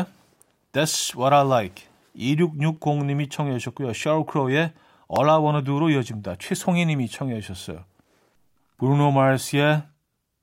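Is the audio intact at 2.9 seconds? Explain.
No. Likely clock drift buffer slips from mismatched device clocks drop or repeat small sample blocks every 2.39 s from 0.39 to 9.93 s, heard as regular clicks.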